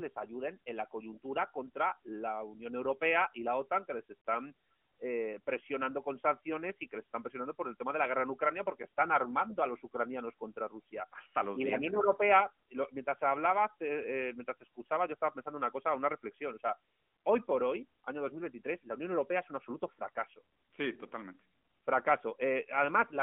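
Nothing in this speech recording stood out as a fault on listening.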